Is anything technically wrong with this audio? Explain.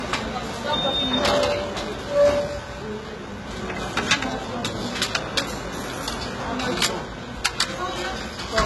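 Yes. Throughout, the sound is dull, with nothing above 11.8 kHz, likely low-bitrate audio saved at a high bitrate: a very low-rate original re-encoded as high-rate MP3, which cannot restore the removed detail.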